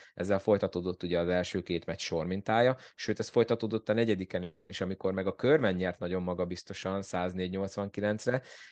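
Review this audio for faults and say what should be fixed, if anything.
A call audio freeze runs from 4.43 to 4.72 s, between "ez folytatódott a negyediken" and "amikor meg a körben". The last sound is stretched into a fading buzz or hiss for about 260 ms, likely because delayed packets emptied the jitter buffer. Unlike a packet-loss dropout, no speech is missing; the speech resumes exactly where it stopped, now 260 ms later. A larger or adaptive jitter buffer on the receiving end would prevent this.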